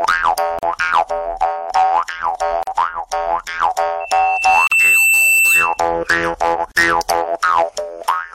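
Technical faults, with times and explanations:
0.59 s, 2.63 s, 4.67 s and 6.72 s: gap at a join of encoded pieces. The audio was encoded in separate two-second segments and joined without trimming, so each join keeps the encoder's start-up delay and the padded final frame of the previous piece. A hole of about 42 to 43 ms opens in continuous sound every 2.0 s, with its edges smeared by the codec. The sound then resumes exactly where it broke off.
4.0 to 5.79 s: loudspeaker feedback squeal. A microphone is picking up the loudspeaker it drives, and near 2.7 kHz the loop gain rises above one, so that frequency feeds on itself. A single high tone swells over roughly a second until it sits about 5 dB above the rest of the sound. It holds as a squeal until it stops at 5.79 s.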